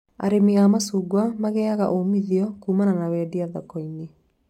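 Throughout the speech, the converter's sampling clock wanders, so each sample is captured a little early or late at random, with timing errors of around two microseconds. This is sample clock jitter. Because the error scales with how steeply the waveform is changing, it rides on the signal itself, sitting roughly 40 dB below it. The result is a fine hiss and grittiness that thickens on loud passages and sibilant, high-frequency sounds and disappears in the pauses.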